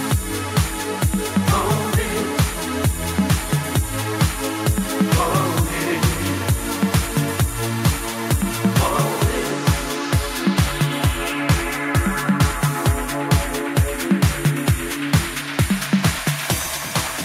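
No technical faults are audible.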